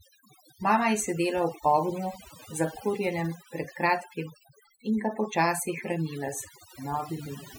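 A speech recording shows overdone noise removal throughout: an overly aggressive noise reducer cut frequency bands near the noise floor, leaving near-silent gaps with twinkling specks.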